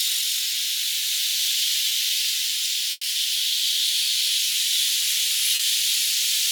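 At 1.89–1.93 s, a short concealed packet loss: about 20 ms of audio arrived too late, and the receiver extended the preceding sound to bridge it, leaving a brief smear. At 2.91–3.05 s, a burst of packet loss dropped about 120 ms. Concealment stretched and faded the last sound into a held buzz or hiss, then about 20 ms of silence, before the audio resumed further on. At 5.55–5.61 s, another short concealed packet loss filled about 40 ms, heard as a momentary wobble.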